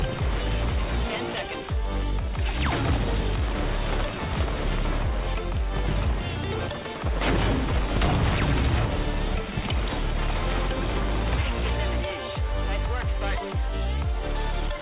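No technical faults can be heard at any point in this audio.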